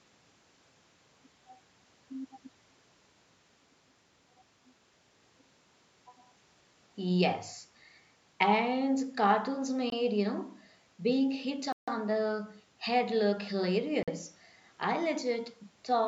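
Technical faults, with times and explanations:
9.90–9.92 s, 11.72–11.88 s, 14.03–14.08 s, Bluetooth stall: speech cuts to silence for 21, 151 and 46 ms, then resumes; likely interference delayed packets, emptying the headphone buffer.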